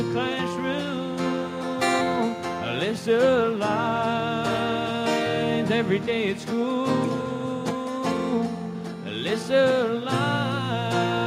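There are no technical faults to describe at any point in the clip.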